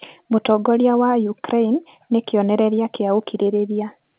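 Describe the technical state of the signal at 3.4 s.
At 3.4 s the speech is intact, with no dropout, distortion or other fault, and the narrow telephone sound there is simply the A-law G.711 path working as designed.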